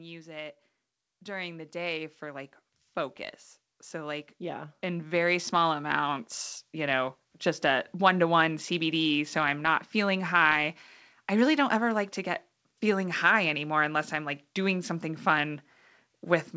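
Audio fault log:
0.21–2.59 s and 3.9–7.5 s, automatic gain rising: the gain control judged the input too quiet and slowly raised its gain, by about 7 dB, then about 9 dB up to "a one to one", so speech and background swell together.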